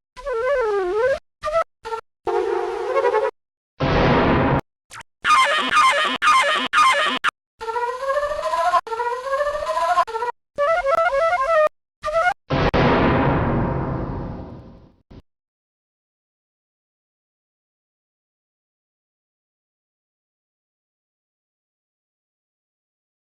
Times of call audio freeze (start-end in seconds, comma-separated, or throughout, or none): none